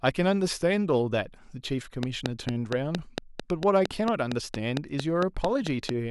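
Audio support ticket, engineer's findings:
Train of clicks, 2.03 to 5.90 s: regular ticking at 4.4 per second, about twenty in all, peaking roughly 20 dB above the speech and audible in pauses. Near-identical pulses at a steady pace; likely interference from nearby equipment or a faulty connection or power supply.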